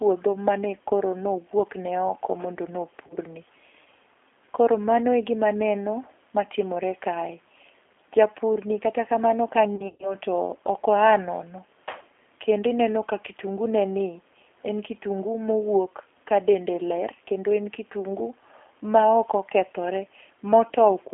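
Throughout, the G.729 codec rebuilds the speech from a filter, pitch predictor and sparse pulses, as fits an 8 kbit/s stream, so the 300 Hz to 3.4 kHz line sounds rough and synthetic. From 3.07 to 3.16 s, VoIP packet loss concealed by the speech codec covers about 30 ms of missing audio: the decoder extrapolates its last frame, briefly stretching the speech into a fading, concealed sound. From 9.76 to 10.16 s, 150 ms of losses scattered over 240 ms, with a longest gap of 120 ms, produce longer concealed stretches, and the speech stays weak and distorted until the decoder recovers.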